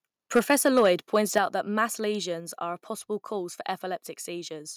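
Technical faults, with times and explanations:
0.35 to 0.91 s, microphone overload: the loudest syllables take on a harsh, crackly edge until just before "pointed out that mass". The input level was likely set too high, driving peaks about 5 dB past the converter's ceiling and flattening their tops on a few percent of samples.
0.39 s and 1.38 s, microphone volume stepped down: the whole sound, background included, drops abruptly in level, first by about 2 dB, then by about 6 dB just before "out that mass". This is likely the call software reacting to the overloaded peaks by cutting the microphone's input volume in single steps.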